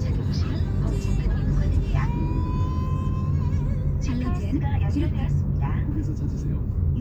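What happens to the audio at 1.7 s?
Nothing goes wrong at 1.7 s; the sound runs on cleanly through that moment with no dropout, click or other fault.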